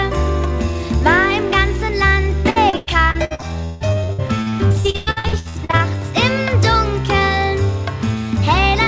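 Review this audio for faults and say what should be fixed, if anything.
Repeated packet loss (robotic sound) runs from 2.50 to 5.82 s. Around two dozen short dropouts occur, the longest 160 ms. Each is patched by stretching the preceding audio, so about 39% of that span is concealment fill, heard as choppy sound with pieces missing. To prevent it, reduce loss on the network path and give the jitter buffer more depth, or enable redundancy such as FEC.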